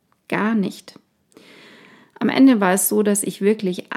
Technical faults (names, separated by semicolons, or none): none